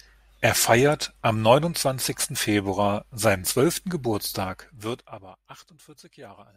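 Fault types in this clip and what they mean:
zipper noise: after "seinen zwölften" the level steps down about 20 dB in unsmoothed 1 dB jumps, roughly twenty a second, ticking from 4.41 to 5.48 s.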